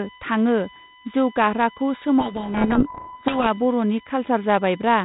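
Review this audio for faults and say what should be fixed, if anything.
A steady, fixed-pitch whine runs through the whole recording, built on 1 kHz and loudest at its 11 kHz harmonic, sitting not far below the speech. This is USB whine: the bus's 1 ms frame timing pulls current in bursts that leak into the audio through shared power or ground. Prevent it by powering the interface separately or fitting a ground-loop isolator or ferrite on the USB line.

From 2.2 s to 3.48 s the speech is buried in harsh, grinding distortion. This is a codec payload misread: sender and receiver disagree on the bit order of the G.726 code words, so the decoder reconstructs the samples from scrambled values. The 32 kbit/s G.726 coding shows only light damage outside that stretch. Prevent it by matching the packing convention on both ends.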